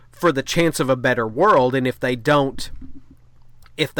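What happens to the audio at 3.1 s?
Nothing goes wrong at 3.1 s; the speech carries on intact through that moment.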